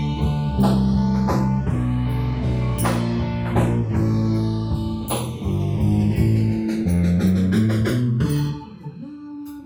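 From the start to the end of the clip the two channels are drifting apart. They run on independent clocks that disagree by something like 100 parts per million, so the gap between them widens steadily to about 0.7 milliseconds by the close. Folded to mono, that sliding offset creates comb-filter notches that creep through the spectrum, heard as a slow flanging sweep. A spectrogram shows diagonal dark bands descending over time.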